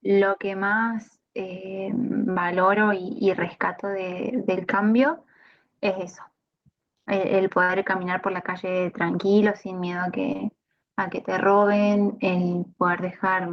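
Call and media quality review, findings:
Short concealed packet loss, 2.31–2.37 s: brief smear where about 40 ms went missing and the decoder's concealment papered over it by stretching the preceding sound. Receiver-side jitter buffer/decoder filling a late or dropped packet.

Short concealed packet loss again, 10.33–10.40 s: two back-to-back 20 ms holes, fits two consecutive 20 ms packets. Audible as a quick wobble, then it blends back into real audio. Same mechanism, same component.

Burst of packet loss, 7.63–7.71 s: roughly 60 ms gone in one go. Concealment extends the last sound and fades it out, so you hear a held buzz or fading hiss, then the audio picks up further along with that stretch missing.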